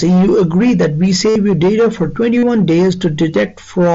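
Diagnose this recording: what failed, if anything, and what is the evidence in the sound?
Buzzy held tones at 1.30–1.36 s and 2.38–2.43 s, warbling as speech resumes: concealed Bluetooth headset packet loss on the radio link, with 60 and 45 ms gaps filled by repeating recent waveform.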